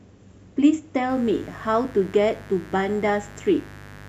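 From about 1.09 s to the end of the speech you get a mains buzz, a steady raspy drone under everything. It's built on 50 Hz. Something like a dimmer, a rectifier or an unshielded cable is letting sharp switching spikes into the signal twice per mains cycle, so the harmonics stack up well into the kilohertz range. That's why it sounds gritty rather than like a clean hum. It sits roughly 20 dB below the speech.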